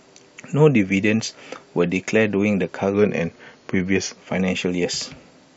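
From 2.94 to 4.18 s the speech slows 6.2% and drops 111 cents, then snaps back. That is a drift correction step, likely clock-matching, and its abrupt, steady shift rules out wavering wow.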